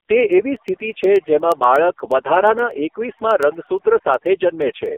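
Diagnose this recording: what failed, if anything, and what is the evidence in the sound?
Call processing: overdone noise removal has pushed the background down into twinkling specks. Unlike codec warble, the speckle sits in the gaps rather than riding on the voice.

Codec: the AMR narrowband mobile codec is present throughout. Nothing passes above 3.5 kHz, the band behaves like a 300 Hz to 3.4 kHz phone line, and the speech is heavily buzzy and synthetic, which fits AMR-NB at its lowest mode, around 4.75 kbps. That places it at the codec, not a simple low-pass filter.

Converter or digital interface: word clock ticks run from 0.21 s to the end at about ten per second, some forty sharp single-sample ticks of uneven strength. The steady rate points to an unlocked receiver clock drifting by roughly a couple of hundred ppm, not to random dropouts or buffer underruns.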